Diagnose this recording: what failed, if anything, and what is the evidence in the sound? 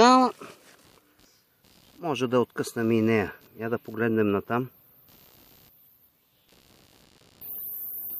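Computer activity noise in the analogue wiring runs throughout: a faint buzz, about 40 dB below the signal, pulsing near 70 per second as processor load shifts the shared ground. Unlike steady mains hum, it tracks computer activity.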